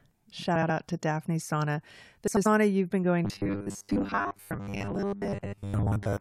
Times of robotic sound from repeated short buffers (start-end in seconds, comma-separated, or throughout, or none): 3.25-6.20